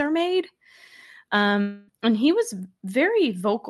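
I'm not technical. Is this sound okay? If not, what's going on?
No. From about 1.61 to 1.90 s, just before "and he was", the speech stops and is replaced by a smeared buzz that stretches the last sound for roughly a quarter of a second. That is most likely a long network dropout: the call lost that much audio, and the receiver filled the gap with an imitation instead of the real speech, so what was said there is gone. A brief glitch would last only a split second. This one lasts long enough that a piece of speech is missing.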